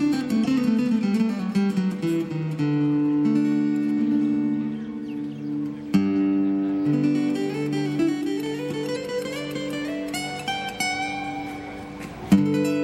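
At 0.44 to 0.46 s there is a brief disturbance from damaged data in the compressed stream. Part of the encoded data at that point is wrong, so the decoder either misreads or rejects the affected frame and has to resynchronise on the next valid frame header. The result is a short burst about 22 ms long that breaks into the audio.

At 3.52 s a single sharp click is heard, likely from dropped samples. A tiny fraction of a millisecond of the waveform is missing, so the signal jumps straight from one value to a later one. That step produces the click without removing any audible sound. A second such click occurs at 8.46 s.

From 8.92 to 8.97 s the damaged-data fault returns and lasts about 44 ms, twice the first. Corrupted frames again force the decoder to lose sync and hunt for the next frame header.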